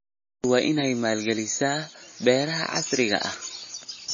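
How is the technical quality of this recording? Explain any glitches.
The technical quality is poor. Audible damage runs through the whole speech clip, most likely from MP3 compression at a starved bitrate. The sound suggests something near 24 kbps.

Throughout, nothing reaches above 7.1 kHz. With too few bits, the encoder drops the treble and zeroes weak frequency lines frame by frame, giving a watery, swirly texture and metallic chirps on s sounds. A spectrogram shows a hard ceiling at 7.1 kHz and flickering gaps below it.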